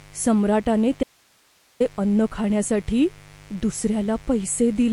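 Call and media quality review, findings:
Mains buzz, whole clip: steady raspy 50 Hz buzz, roughly 25 dB under the speech. Spikes from a dimmer, rectifier or poor shielding, twice per cycle. On a spectrogram, evenly spaced horizontal harmonic lines at 50 Hz multiples, reaching several kHz.

MP3 compression, whole clip: watery, swirly speech, smeared consonant onsets, metallic chirps on sibilants. The likely cause is a starved MP3 encoder, consistent with about 48 kbps. On a spectrogram, a hard ceiling at 11.2 kHz and speckled, flickering patches where weak bands drop per frame.

Audio dropout to a faint residue, 1.03 to 1.80 s: speech cuts abruptly for 0.77 s, only hiss about 40 dB down remains, then resumes on "अन्न खाण्यासाठी". Likely a lost signal with the downstream path still live. Waveform shows a sharp-edged near-flat gap, not a fade.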